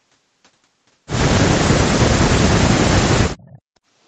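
From 1.86 to 3.26 s, the echo canceller likely mistook the talker for loudspeaker echo while both sides spoke at once, so it turned the microphone signal down. This is speech suppressed in double talk: for roughly one and a half seconds the talker's level sinks by as much as about 40 dB, with the voice thinning and dropping out in pieces. The same happens again briefly at 3.59 to 3.71 s, a dip of about 40 dB lasting roughly a tenth of a second.

Between these, from 3.37 to 3.61 s, is an echo leak. The far side's echo canceller likely failed to remove everything its microphone picked up from its loudspeaker, so a faint copy of the voice, delayed by 407 ms and about 25 dB below the speech, comes back as a scrap trailing behind the original.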